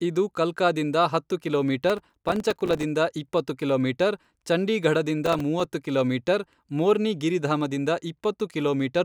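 A gritty processor overload crackle tears through the speech from 1.90 to 2.83 s, after "ಇದು ಕಲ್ಕಾದಿಂದ ಹತ್ತು", and again more briefly from 5.24 to 5.65 s, before "ಕಿಲೋಮೀಟರ್ ಮೋರ್ನಿ". Each time the processor missed a run of deadlines on small buffers of around 3 ms, leaving short hard-edged silent gaps.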